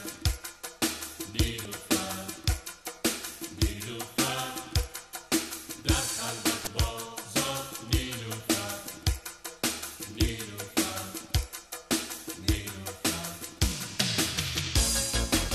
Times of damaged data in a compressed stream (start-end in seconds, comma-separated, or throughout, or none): 1.62-1.66, 6.64-6.67